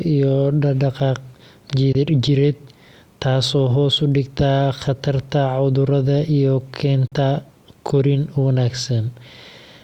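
At 1.92 s the speech drops to silence for about 20 ms, then returns at 1.95 s. The edges are abrupt or fade over a few milliseconds. At 7.07 s, right after "dhigta khatarta cudurrada iyo", a second gap of about 40 ms runs to 7.12 s. Both are likely a Bluetooth dropout. Packets failed to reach the headphones in time and were discarded. The lengths fit one and two lost packets. Speech resumes further on, as if it had kept playing.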